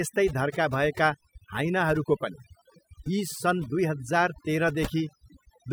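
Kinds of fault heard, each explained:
Overdone noise removal: noise reduction is set too aggressively throughout, pulling individual frequency bands near the estimated noise floor down or out entirely. Pauses sink to near silence dotted with flickering tonal chirps, and low-level speech detail is stripped along with the noise.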